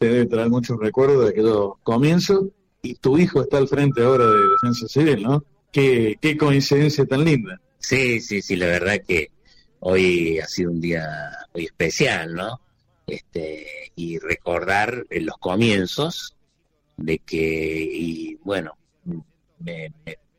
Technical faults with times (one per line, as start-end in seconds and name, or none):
3.91-4.88 loudspeaker feedback squeal